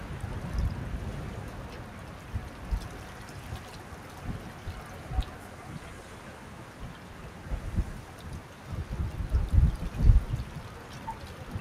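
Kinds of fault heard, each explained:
Noise suppressor applied to music or sounds: a speech-tuned suppressor treats sustained sound and tails as noise, dipping them by about 5 dB throughout, unlike compressor pumping, which follows overall loudness.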